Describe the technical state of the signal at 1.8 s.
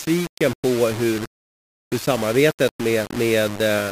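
Low bit depth without dither is present at 1.8 s, as it is across the whole recording. The speech carries a grainy, gritty distortion that shifts with the signal, sitting only about 15 dB below it. That is likely from rounding to roughly 4 bits with no dither.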